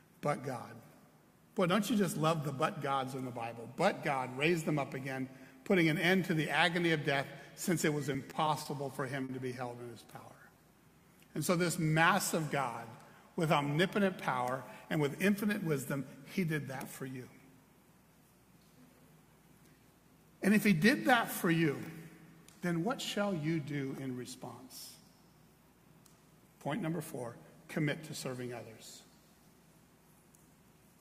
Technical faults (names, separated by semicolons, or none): repeated stalls (stutter); jitter buffer slow-down; jitter buffer speed-up